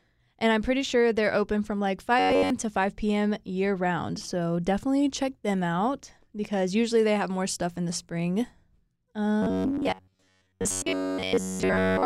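From 2.19 to 2.50 s, and again from 9.43 s to the end, the speech turns into robotic sound from repeated short buffers: a rigid, metallic buzz fixed at about 94 Hz that still roughly tracks the syllables. The likely cause is a stalled audio feed, with roughly 11 ms chunks looped to fill the gaps while most of the real signal is skipped. Unlike a dropout there is no silence, and unlike a pitch shift the buzz pitch never moves.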